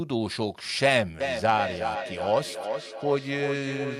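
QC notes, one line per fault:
1.2 to 3.99 s, feedback echo between two devices: from 1.2 s on, the speech keeps coming back at a steady gap of roughly 400 ms, each return thinner and more ringing, peaking at about 6 dB under the direct speech. That fits a second device in the same room playing this mic's feed back out, which the mic then picks up again, and neither device's echo canceller can remove sound the other one played.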